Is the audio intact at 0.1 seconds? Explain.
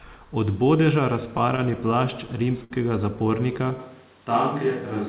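Yes, the speech is intact at 0.1 seconds, with no fault at that moment.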